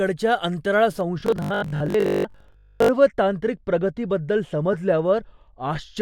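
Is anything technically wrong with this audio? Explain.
Yes, there are three faults.

From 1.01 s to 5.97 s, de-emphasis has been applied wrongly: a treble-cutting filter was run on speech that had no pre-emphasis to undo, or was run twice. The response slopes down smoothly to about 13 dB below 1 kHz at 10 kHz, so the voice sounds dull and muffled.

From 1.20 s to 2.90 s, the speech becomes a rigid, metallic buzz fixed at 50 Hz that still loosely follows the words. The likely cause is robotic sound from repeated short buffers: audio arrived too rarely, and playback looped the last 20 ms for most of this stretch while the real audio was skipped.

From 4.73 s to 4.76 s, a corrupt frame was decoded. Flipped bits in what sounds like a single compressed frame made the decoder apply wrong gains or misread codes, putting energy at the wrong frequencies. The result is a brief 30 ms glitch of misplaced spectral content.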